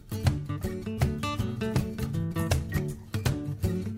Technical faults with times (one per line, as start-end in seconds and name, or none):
none